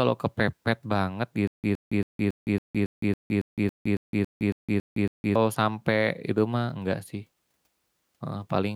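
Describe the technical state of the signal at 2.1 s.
At 2.1 s the speech is caught in a stutter with silent gaps, running from 1.47 to 5.35 s right after "kepepet banget". A likely playback stall replays a 114 ms fragment fourteen times, each followed by 164 ms of digital silence, every 277 ms. The spectrogram shows identical blocks separated by blank columns.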